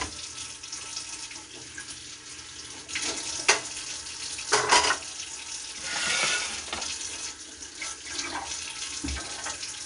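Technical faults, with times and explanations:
Throughout: 4-bit ADPCM compression. Each sample is coded as a coarse 4-bit step from a predicted value, so a gritty hiss rides on every loud passage and rises and falls with the level. Sharp attacks come out roughened because the step size lags behind sudden jumps. On a spectrogram, broadband noise fills in under the louder moments and everything stops cleanly at 10.6 kHz, which fits a sample rate near 22 kHz and a rate of about 89 kbps.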